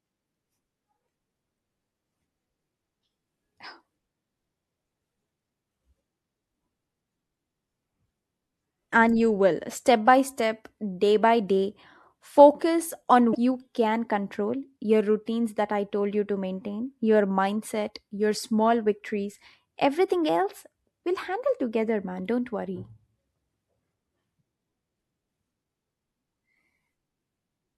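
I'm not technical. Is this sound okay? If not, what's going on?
No. Damaged data in a compressed stream causes brief glitches at 8.89–8.93 s, before "and you will step", and 13.31–13.35 s, after "day by day focus".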